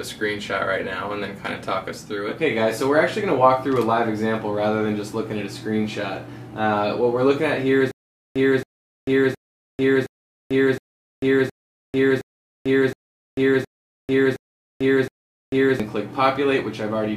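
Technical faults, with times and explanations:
7.91 to 15.80 s, stutter with silent gaps: a burst of about 273 ms repeats 11 times, each followed by roughly 444 ms of digital silence, giving a steady 717 ms cycle. This likely reflects a stalled player or stream replaying its last fragment at each retry, with the intervening audio lost.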